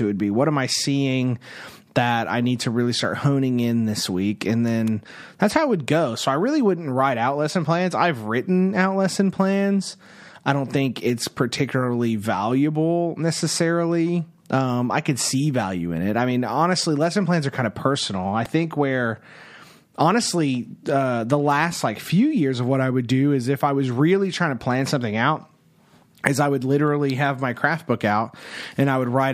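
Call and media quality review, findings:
Electrical switching spike, three sharp snaps over the speech at 4.87 s (before "that's how it would"), 18.45 s (between "kind of personal I" and "think where") and 27.10 s (between "is I would" and "have my craft book"). Each peaks near about -15 dBFS, brief vertical full-band lines on the spectrogram, thin needle spikes on the waveform. Likely a nearby switch or static discharge arcing into the line.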